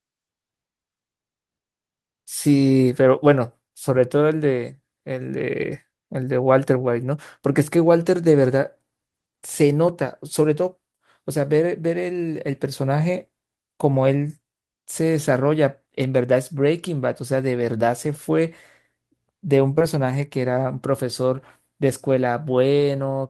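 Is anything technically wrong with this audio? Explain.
Yes. Near the end of the speech, from 19.75 to 19.79 s and again from 19.79 to 19.82 s, there is a brief smeared wobble, heard as one short blur. This is short concealed packet loss: two back-to-back 20 ms gaps never arrived, and the receiver patched each by extending the preceding sound before blending back in.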